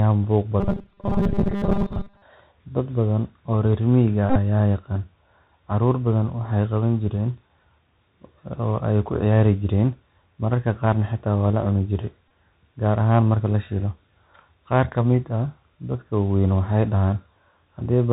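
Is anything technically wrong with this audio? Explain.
Yes. Three kinds of fault can be heard.

The whole clip goes through a Bluetooth CVSD headset codec, which fits a 64 kbit/s link. This codec sends one up-or-down bit per sample, and nothing above 4 kHz survives. The damage is plainly audible: s sounds turn scratchy and a granular hiss sits under the speech.

From 0.60 to 2.22 s there is robotic sound from repeated short buffers. The likely cause is audio arriving too seldom, so the last few milliseconds are replayed instead of new audio. Most of the sound is repeated, and this forces a rigid, metallic 200 Hz buzz, which fits a 5 ms buffer.

The Bluetooth headset packet repeated in two places. From 4.29 to 4.38 s, between "badan oo reer miyiga" and "ayaa yaqaan", 48.8 ms is lost across 60 ms. That fits 13 packets, with runs up to roughly 15 ms. At 12.28 to 12.30 s, just before "gaar ahaan marka la", 22.5 ms is lost, which fits six packets. 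In both places the chip replays the last packet's bits every 3.75 ms, so the sound turns into a brief buzz near 267 Hz.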